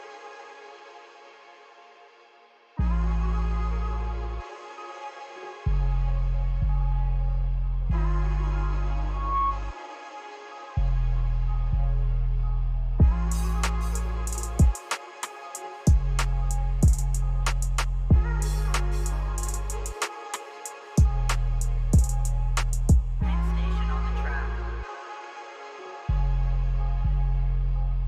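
At 9.11 s a single tone near 1.1 kHz swells over roughly a third of a second to about the audio's own level, stopping at 9.61 s. This is loudspeaker feedback squeal, a microphone re-amplifying its own loudspeaker with loop gain above one at that frequency.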